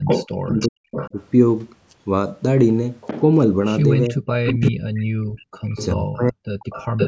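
Speech with two recurring call faults. An echo leak shows up at 0.05–1.21 s, 3.01–3.21 s, 4.45–5.03 s, 5.69–5.86 s and 6.59–7.08 s as a fainter delayed copy of the voice, lagging by 380 ms at first and drifting to 411 ms by the end. It sits about 5 dB below the speech in the loudest stretches and about 10 to 15 dB below in the brief ones. This is likely a loudspeaker-side echo canceller letting part of its microphone pickup return down the line. On a spectrogram it appears as a faded, time-shifted repeat of the harmonic pattern. Speech suppressed in double talk occurs at 0.37–1.14 s and 4.09–6.43 s, where the talker's level collapses by roughly 40 dB in pieces, adding up to under half a second and then around one and a half seconds. This is likely the canceller ducking both voices when it cannot separate them. In the waveform it shows as abrupt gaps and sudden drops in envelope. In the spectrogram it shows as blank or dimmed columns beneath the call band's 8 kHz ceiling.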